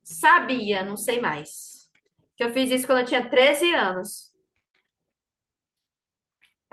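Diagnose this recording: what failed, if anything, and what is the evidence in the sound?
Nothing failed; no faults found.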